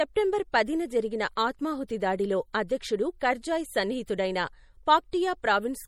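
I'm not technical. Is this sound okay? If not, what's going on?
No. The damage runs through the whole clip, start to finish. The speech has a watery, swirly quality, and the s sounds come out metallic. This is likely MP3 compression. To make the file small, the encoder threw away sound details it judged you wouldn't miss. Here it threw away too much. Quiet details flicker in and out, which causes the swirl. The very highest treble, above about 19.5 kHz, is missing, though few people would notice that part.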